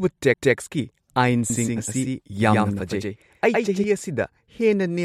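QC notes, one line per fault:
0.34 s, CD skip: A brief tick and a mute of a few milliseconds, after which the speech resumes from a different point, as if the pickup jumped to another turn of the disc spiral and lost or repeated a fraction of a second. On the waveform it shows as a tiny flat gap with a sharp edge on each side. On the spectrogram there is a thin vertical broadband line and a discontinuity in the harmonic tracks where the content jumps.
1.50–3.84 s, doubled audio track: A second full-band copy of the speech runs about a tenth of a second behind the original and about 5 dB quieter, giving a stuttering, slapback doubling with no reverberant tail or room colouring. It is likely caused by the signal being captured again over a slower path, or by an edit leaving two misaligned copies. The copy starts and stops abruptly. The waveform shows each syllable followed by a smaller identical shape. 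The spectrogram shows harmonic patterns repeated at a fixed offset.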